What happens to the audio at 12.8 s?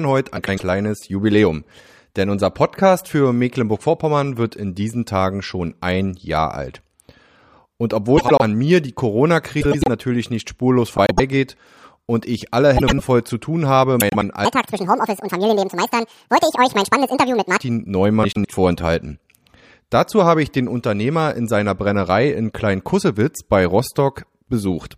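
At 12.77 s the speech hits a frames-out-of-order fault lasting until 13.00 s. Two adjacent blocks of about 104.5 ms each, which fits runs of four frames apiece, were decoded in swapped order. The quarter-second stretch plays with its halves exchanged, so the sound turns into a brief garbled flutter. No time is lost.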